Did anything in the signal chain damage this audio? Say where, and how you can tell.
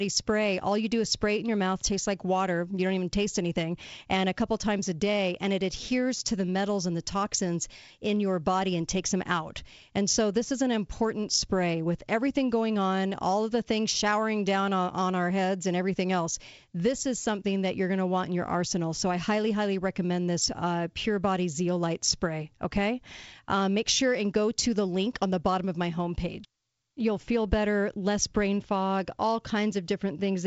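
No, nothing in the chain damaged this speech audio; the only processing audible is G.722 wideband telephone coding at 56 kbit/s, which leaves a faint hiss in the upper band and nothing above about 7.7 kHz, as that codec is expected to.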